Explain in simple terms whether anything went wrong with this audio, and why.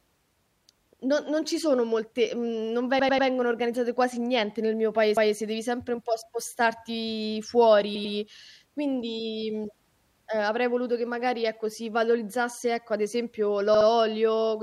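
Chunks of the compressed speech were sent or saved more than once, so the player ran the same short stretch again. These repeated frames sound like a stutter. A 96 ms slice plays three extra times at 2.99 to 3.28 s, a 192 ms slice once more at 5.17 to 5.36 s, 96 ms twice more at 7.95 to 8.14 s, and 64 ms twice more at 13.74 to 13.87 s. Together they make the speech about 0.8 s longer.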